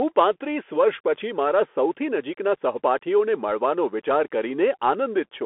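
Throughout, the speech carries Bluetooth CVSD headset codec damage: a one-bit delta coder with adaptive step size, which fits a 64 kbps link. On a spectrogram, energy sits between 250 Hz and 3.4 kHz and stops cleanly by 3.8 kHz; the sound is thin, with plainly audible granular grit.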